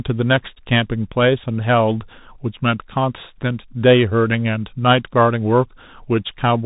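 Speech coded throughout with the Bluetooth CVSD headset codec: nothing passes above 3.8 kHz, and the one-bit delta modulation, which fits a 64 kbps link, leaves plainly audible damage. Its adaptive step lags loud high sounds, making s sounds scratchy over a granular hiss.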